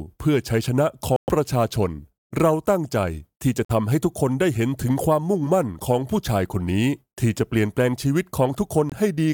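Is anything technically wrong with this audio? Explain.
Yes. The audio has three instances of corrupt frame muted: 1.16 to 1.29 s, 3.65 to 3.71 s, and 8.89 to 8.94 s. Bit errors damaged compressed frames, the decoder rejected them, and the player substituted silence, so the audio drops out abruptly for about 130, 64 and 44 ms, lengths that fit runs of a few codec frames. Timing stays intact. On a waveform each appears as a flat, near-silent stretch with sharp edges. A spectrogram shows clean full-band vertical gaps.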